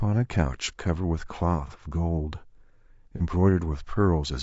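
Throughout, the speech sounds rough and grainy, with noise between harmonics and a thin top band, likely low-delay AAC compression at a rate that fits about 32 kbps. At 1.67 to 1.72 s and 3.17 to 3.21 s, AAC frame loss with concealment leaves brief smeared, noisy patches, each consistent with a single lost frame patched from the previous spectrum.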